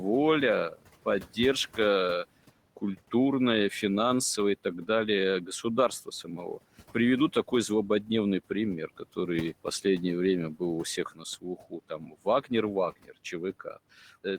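Speech with noise suppressor artifacts throughout: the suppressor pulls the background down by about 18 dB in the gaps and lets it rise again under speech, so the room noise (about 20 dB below the voice) pumps. On a spectrogram the noise floor looks patchy and blotchy between phrases rather than a smooth band. There is also speech cut by the noise suppressor, where it mistakes quiet speech for noise. From 0.71 to 1.79 s, roughly a third of a second of soft sounds is pulled down by up to about 18 dB. From 5.46 to 9.85 s, just after "финансовое и так далее", a few hundred milliseconds drop by up to about 13 dB. From 10.59 s to the end, the drops reach about 19 dB. These show as clipped word tails and missing faint consonant energy on the spectrogram, and as sudden envelope dips on the waveform.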